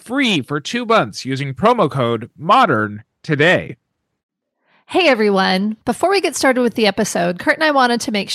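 From 2.63 to 5.15 s, right after "months using promo code", the speech turns dull and muffled, its treble sloping smoothly away to about 10 dB down at 10 kHz. That is de-emphasis applied wrongly: a treble cut meant to undo pre-emphasis hit audio that never had any, or was applied a second time.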